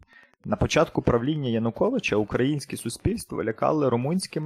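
Speech runs with a faint, steady ticking underneath for its whole length. The fault is Wi-Fi interference. A nearby Wi-Fi radio sends a beacon every 102.4 ms. The audio circuit picks it up and rectifies it, so each beacon lands as a tick. That gives a regular pulse of about ten ticks a second. The ticking sits well below the speech, roughly 35 dB down. It is easiest to hear in pauses.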